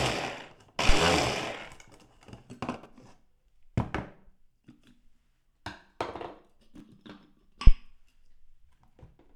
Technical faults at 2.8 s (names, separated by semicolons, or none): chunks out of order